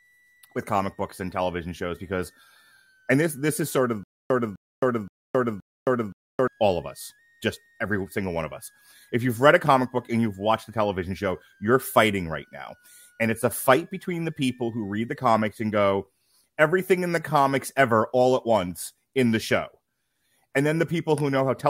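From the start to 15.19 s there's a switching supply whistle, a faint high tone around 1.5 kHz wandering between 1.4 and 2.0 kHz, from a power supply bursting audibly. Between 4.03 and 6.48 s you get a stutter with silent gaps: a 0.25 s fragment repeats four times with 0.27 s of dead silence between, likely a stalled stream retrying, so that speech is lost.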